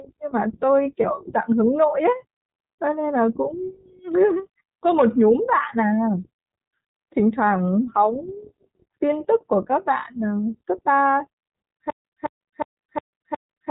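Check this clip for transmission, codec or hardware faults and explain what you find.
Three faults are present in this speech clip: iLBC coding throughout, one lost iLBC frame near the start, and a stutter with silent gaps at the end.

iLBC codec, throughout. The narrowband band limit removes everything above 4 kHz, and the damage is plainly audible. The voice has a rough, slightly synthetic edge. iLBC codes each frame's excitation independently of the frame before, which trades smoothness for robustness. The audio fits iLBC's 15.2 kbps mode with 20 ms frames.

Lost iLBC frames, at 1.02 s. A gap of about 20 ms, the length of one frame, was filled by the decoder. Lacking the real data, it repeated the last pitch cycle blended with noise. Because the loss is so short, this comes across as a brief held, faintly buzzy or breathy vowel-like blip rather than a fade. The frame after it decodes independently, so the voice snaps back immediately.

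Stutter with silent gaps, from 11.9 s to the end at 13.7 s. A fragment of about 213 ms plays, then about 148 ms of digital silence follows, repeating every 361 ms. The burst returns five times in a steady rhythm. The cause is likely a stalled stream or player that replayed its last buffered fragment at each retry and then ran dry. Whatever should have played during this stretch is lost.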